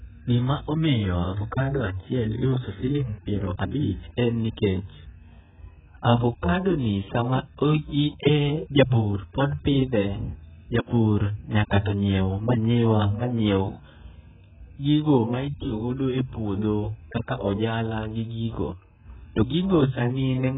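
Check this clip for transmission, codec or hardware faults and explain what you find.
There's one problem, and it runs the whole length of the speech: heavy AAC compression damage. Nothing gets through above 3.7 kHz, so the voice sounds dull and boxed-in, and sibilants come out smeared and fizzy, with a watery warble on held sounds. That's likely AAC-LC squeezed down to something like 8 kbps. At that rate the encoder drops the top of the spectrum and quantises what's left so coarsely that gaps and substitute noise creep in.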